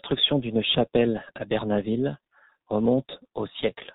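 G.723.1 codec damage runs throughout this speech: everything above 4 kHz is missing, and the coarse 30 ms frames at a rate near 6.3 kbit/s leave the sound muffled, hoarse and smeared at consonants.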